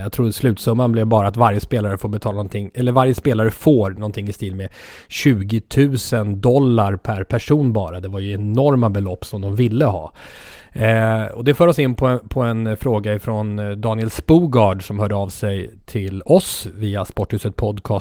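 No technical faults are audible.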